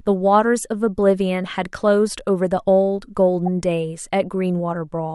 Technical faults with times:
3.46 corrupt frame decoded

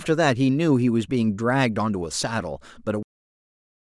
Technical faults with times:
3.03-3.93 cut-off end

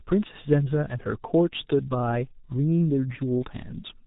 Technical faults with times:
0.00-4.07 G.723.1 codec

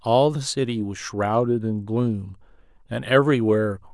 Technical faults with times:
none

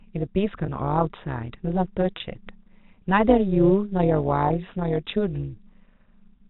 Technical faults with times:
0.00-6.49 overlap-add ripple
0.66-0.68 packet loss with pitch repetition
2.18-2.20 packet loss with pitch repetition
4.48-4.50 packet loss with pitch repetition

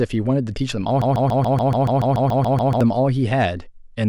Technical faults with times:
1.02-2.81 broken-record loop

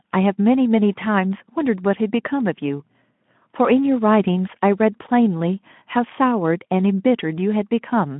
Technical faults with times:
none

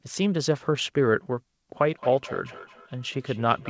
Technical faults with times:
1.92-3.70 feedback echo between two devices

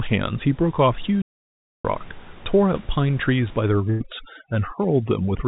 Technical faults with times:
1.22-1.85 playback stall
3.69-5.47 overdone noise removal
3.90-4.02 burst of packet loss

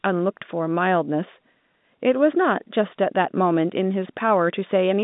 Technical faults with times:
none

